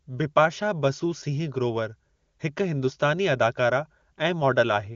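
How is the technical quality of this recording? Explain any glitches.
There are no glitches in this speech recording: it carries the band-limited sound of the AMR wideband (HD Voice) codec, with nothing above about 7.1 kHz and only faint coding effects, which points to the codec's top rate of 23.85 kbit/s.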